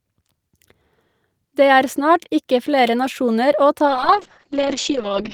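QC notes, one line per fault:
3.86–5.33 s, call bitrate drop: right after "ikke flere nasjoner å" the bitrate falls from 32 to 7 kbps and stays there to the end, so the coder gets coarse and watery and the top end is chopped from 20 kHz to 8 kHz, sounding muffled.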